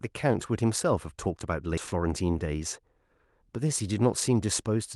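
At 1.77 to 1.79 s a skip ahead occurs. About a second of speech is dropped. The two sides join almost directly, with no gap heard.

From 1.87 to 2.72 s comes a jitter buffer speed-up. Short pitch-period pieces are cut repeatedly, about a tenth of a second in all. Speech runs 110% fast at unchanged pitch and sounds hurried.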